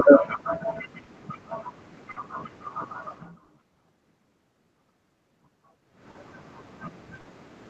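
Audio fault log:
Throughout: clock drift between sender and receiver. The sender's clock runs roughly 4 percent slow against the receiver's, so the jitter buffer keeps draining. Small timing hiccups recur at uneven intervals across the speech, with stalls and stretched passages where the receiver waits or pads.
1.03–1.09 s, 2.11–2.18 s, 3.44–3.50 s, 6.11–6.17 s, 7.21–7.27 s: short stall from a late packet. Each time the buffer runs empty, and the last sound is held for 40 ms (50 ms at 2.11 s) until data arrives. Nothing is lost, but a sound lingers with a slight buzz or dip.
4.29–5.91 s: repeated timing corrections. To keep pace with the slow sender, the receiver repeatedly inserts short repeated pieces, playing this stretch at about 97 percent speed and adding roughly 70 ms in total. The edits are small and unevenly spaced.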